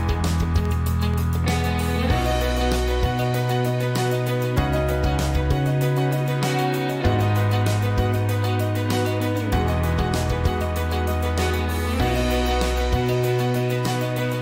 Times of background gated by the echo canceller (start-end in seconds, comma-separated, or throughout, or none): none